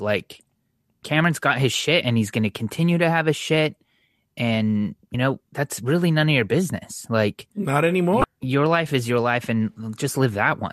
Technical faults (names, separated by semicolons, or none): damaged data in a compressed stream